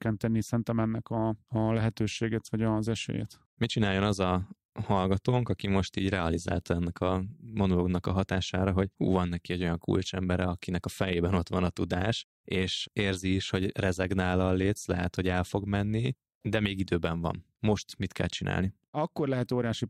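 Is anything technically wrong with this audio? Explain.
No, nothing in this speech recording points to a technical problem.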